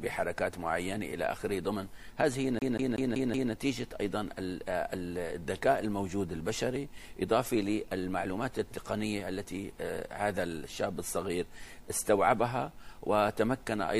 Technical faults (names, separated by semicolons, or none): CD stuck on one turn